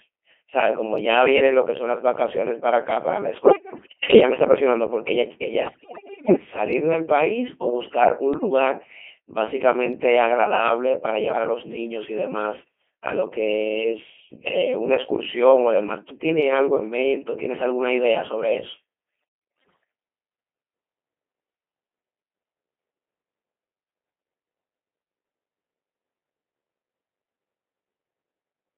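Codec 2 vocoding runs through the whole speech clip. It is a heavily damaged, robotic, buzzy rendering held to roughly 250 Hz to 3.4 kHz, at 2.4 kbit/s. Only pitch, voicing, level and spectral shape survive, and the decoder rebuilds the voice from sine waves rather than the original waveform.

Bit errors on digital voice radio strike at 3.44 to 4.20 s, 5.66 to 6.36 s, 8.34 to 8.50 s and 19.60 to 19.84 s. Corrupted bits, on the order of a tenth of them and a fifth in the second burst, scramble the vocoder's frame parameters. The voice lurches in pitch, loudness and timbre, breaking into warbles, bleeps and robotic gibberish.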